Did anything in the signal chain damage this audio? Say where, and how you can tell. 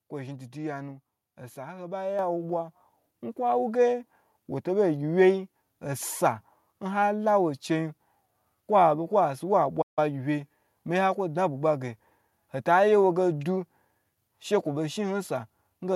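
Yes. At 2.19 s the level jumps by about 6 dB in a single step, with voice and background rising together. That is a microphone volume stepped up by call processing adjusting the device input gain. A compressor or AGC would ride level gradually and act mostly on the voice.

From 9.81 s to 9.99 s the output goes fully silent for about 153 ms mid-flow, then resumes. This is a playback stall, likely the player's buffer running dry or its thread being blocked. Network loss with concealment would fill the gap rather than leave clean silence.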